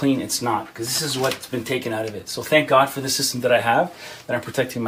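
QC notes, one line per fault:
1.06–4.19 s, clock drift buffer slips: a click about every 1.05 s, four or so in all. Likely two devices on separate clocks drifting apart by roughly 150 ppm, so the buffer between them periodically drops or repeats a handful of samples.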